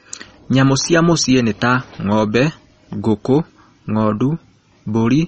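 Throughout, the speech is band-limited and watery, with swirling, chirpy s sounds and softened consonant attacks, likely from MP3 compression at a low bitrate around 32 kbps. On a spectrogram, energy stops flat at 8.3 kHz, and the upper bands below it flicker in and out.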